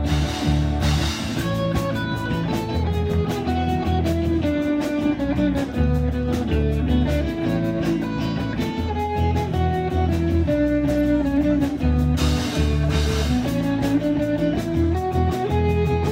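No technical faults can be heard anywhere in the signal.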